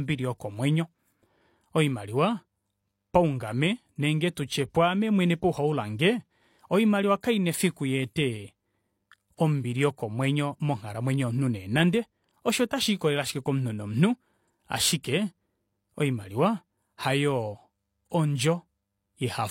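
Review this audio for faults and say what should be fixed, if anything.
A short hiss leads into two sharp onsets in the speech, softening them: once from 7.21 to 7.23 s, spread over 24 ms, and once at 18.10 s, spread over 14 ms. This is pre-echo. The transform codec spread its quantisation noise across a whole block, so noise sized for the loud attack also filled the quiet moment just before it, where nothing masks it. Encoding with block switching enabled, so transients get short blocks, or at a higher bitrate would prevent it.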